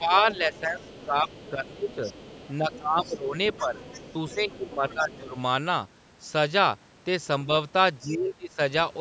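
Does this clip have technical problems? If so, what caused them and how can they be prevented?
Yes. Speech suppressed in double talk: the voice dips by roughly 10 to 20 dB at 0.0–2.03, 2.58–3.78, 4.34–5.37 and 8.03–8.59 s. This is likely the echo canceller turning everything down while both sides spoke at once. Using headphones keeps the far side off the loudspeaker, so the canceller has no overlap to mishandle.

Other side's voice leaking through: a faint second voice, roughly 20 to 25 dB below the talker, is heard at 0.31–1.51, 1.89–2.77, 3.17–4.55 and 4.89–5.17 s. It is likely loudspeaker echo that the canceller failed to remove from the microphone. Headphones, or a lower loudspeaker volume with the microphone farther from the speaker, would stop it.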